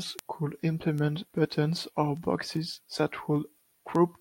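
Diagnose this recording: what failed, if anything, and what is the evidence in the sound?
A train of sharp ticks of uneven strength runs through the speech from 0.19 s to 4.15 s, about twenty of them at a steady spacing of roughly 0.2 s. These are word clock ticks at the digital interface stage. The receiving device is running on its own clock rather than locking to the sender's. The two rates differ by something on the order of 100 ppm, so every slip drops or repeats a single sample, and each discontinuity is heard as a click.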